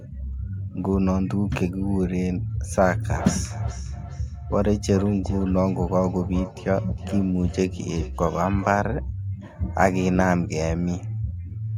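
From 2.86 to 8.87 s, each stretch of speech returns as a fainter copy roughly every 0.4 s, peaking about 14 dB below the direct sound. This is feedback echo between two devices: one device replays the other's microphone signal, which that microphone then recaptures.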